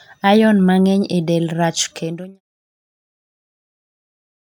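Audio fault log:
Nothing wrong turns up in this speech clip, just a gentle fade-out that begins around the two-second mark and has faded out by 2.41 s, the way an editor would shape an ending.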